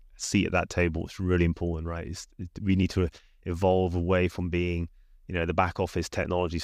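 Nothing in this speech recording stood out as a technical fault on listening.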